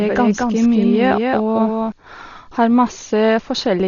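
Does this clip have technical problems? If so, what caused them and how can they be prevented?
Yes. Throughout the speech there is heavy Dolby Digital compression: nothing is present above 7 kHz, so the sound is dull, and a rough, fluttering noise hangs around tonal parts. The likely cause is an AC-3 style encoder at a bitrate around 32 kbps. It narrows the band and gives many frequency lines no mantissa bits, so the decoder fills those lines with dither noise. Prevent it by encoding at a substantially higher bitrate or with a codec suited to low-rate speech.

From the start to 1.92 s there is a doubled audio track. A second full-band copy of the speech, roughly 5 dB quieter, trails the original by about a fifth of a second. It has no decay or room colour and stops abruptly at 1.92 s. This is likely a second capture through a slower path, or an edit leaving two out-of-step copies mixed together. 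Prevent it by routing each source only once and checking the edit timeline for duplicate clips.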